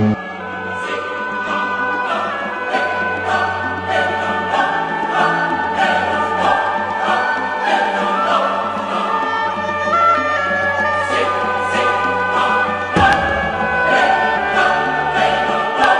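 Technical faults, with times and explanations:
0.0 to 2.0 s, adaptive stream starting at a low bitrate: nothing is heard above 9 kHz, and codec artefacts are heavier. This fits a low-bitrate opening, perhaps near 24 kbit/s, chosen to start fast. At 2.0 s quality jumps up with no gap.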